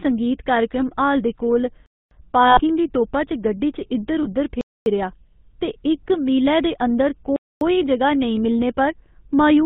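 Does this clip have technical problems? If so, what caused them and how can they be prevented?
Yes. Three kinds of fault are audible.

The GSM full-rate codec runs throughout. It gives a buzzy, gravelly roughness and removes everything above 4 kHz, which fits 13 kbps GSM. Unlike plain band-limiting, the grit comes from its coarse pulse excitation. Using a wideband codec such as AMR-WB or Opus prevents this.

A gap between chunks occurs at 1.86–2.11, 4.61–4.86 and 7.36–7.61 s. Each is a silent hole of 250 ms after 2.5 s chunks. The sound resumes intact, so these are delayed joins rather than lost audio. Gapless playback with prebuffering, or trimming the codec padding, prevents this.

Lost GSM frames occur at 2.47–2.61 s, about 100 ms and likely five frames, and at 4.23–4.27 s, about one frame. The sound is held as a metallic ring rather than clean silence. Reducing radio transmission errors, or adding error protection and retransmission, prevents this.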